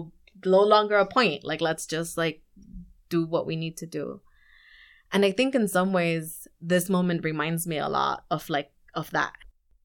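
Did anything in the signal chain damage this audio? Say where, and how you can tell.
No, nothing in the signal chain audibly damaged this speech recording. None of its stages left a mark at any point in the clip.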